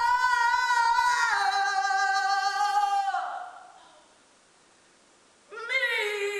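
From 2.87 s to 5.93 s the sound drops about 2 dB and gains faint hiss, roughly 35 dB down. This is digital radio blending to analogue: the digital signal failed and the receiver cross-faded over 328 ms to FM, then back.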